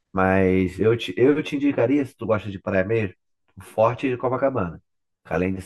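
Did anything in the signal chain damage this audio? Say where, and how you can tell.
Yes. From 0.7 s to the end, the speech turns hollow and phasey, a channel delay producing comb filtering. One channel arrives roughly 10 ms late, likely from a buffer or driver offset, and the mono sum cancels at evenly spaced frequencies, with the first notch around 50 Hz.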